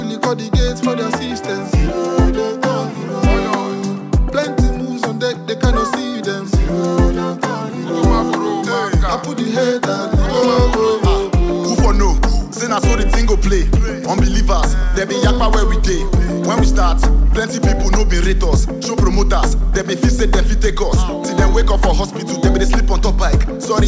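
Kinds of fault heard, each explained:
No faults heard.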